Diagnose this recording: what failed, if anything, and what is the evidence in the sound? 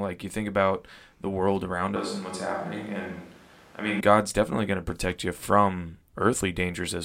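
From 1.96 s, after "about the world around", to 4.00 s, before "god's definitely going to", the speech turns roomy and hollow with less bass. Room noise rises to roughly 25 dB below it, at a similar level. At the capture stage, this is likely a switch to a distant microphone.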